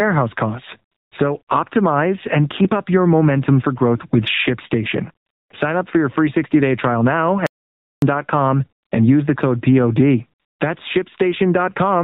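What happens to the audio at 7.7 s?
The audio drops out to silence from 7.47 to 8.02 s, about 0.56 s. The input was likely lost, so silence was written. Sound cuts off and resumes abruptly, with no room tone in between.

Around this moment there is also gain pumping. A fast limiter is likely pulling heavy gain down on loud sounds, so the level swings by around 10 dB.

The sound is also band-limited by the AMR narrowband mobile codec. Nothing passes above 4 kHz. The vocal-tract model at 7.4 kbps makes the speech plainly buzzy and synthetic.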